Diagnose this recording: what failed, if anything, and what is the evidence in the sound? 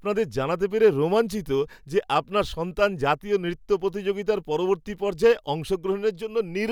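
Nothing in this speech recording points to a failure at any stage of the chain. There is no audible evidence to diagnose, so no mechanism needs explaining.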